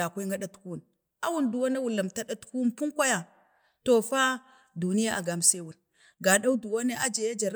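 No technical faults can be heard anywhere in the recording.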